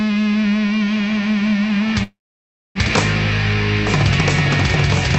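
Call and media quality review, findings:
Call audio freeze, 2.03–2.78 s: audio stalls about 0.75 s. The last sound carries on briefly as a fading buzz or hiss, then near-silence for roughly 0.6 s. Likely jitter-buffer underrun from delayed packets. Playback resumes where it stopped, nothing skipped, later audio shifted about 0.72 s. Unlike packet-loss concealment or a dropout, no content is lost; a gap is inserted instead. The top end, capped near 8 kHz by the Opus settings at 32 kbps, returns unchanged after the stall.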